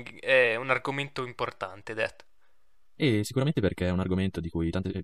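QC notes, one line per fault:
3.16–5.04 s, time-stretched section: From 3.16 s to the end, the speech suddenly runs 1.58 times faster while its pitch holds steady. It sounds rushed. Software likely squeezed this part to fit a length, dropping short slices to preserve pitch.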